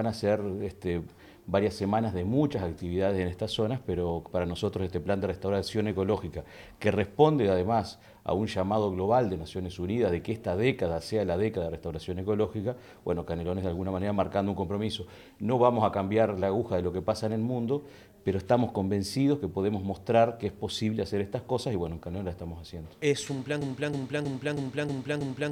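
At 23.62 s the audio locks into a broken-record loop. A fragment of about 0.32 s repeats exactly, back to back. It plays six times and runs to the end of the clip. The repeats are identical, with no variation between them. This likely comes from a stalled player, encoder or stream that kept resending the last fragment it held. Whatever should have played in those final seconds is lost.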